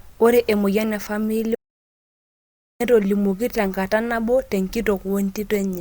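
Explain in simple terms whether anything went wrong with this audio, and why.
At 1.55 seconds the speech cuts off and goes completely silent until 2.80 seconds. That is an audio dropout to silence. Even the background room sound disappears. The likely cause is a lost input, so about 1.25 seconds of speech is simply missing.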